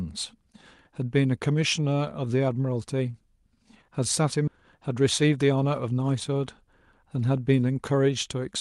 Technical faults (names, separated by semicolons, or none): skip ahead; jitter buffer speed-up